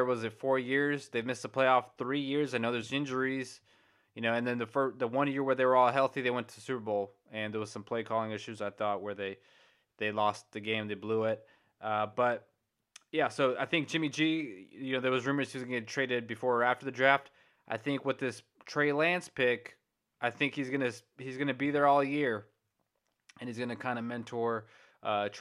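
Nothing in this speech recording stood out as a technical problem on listening.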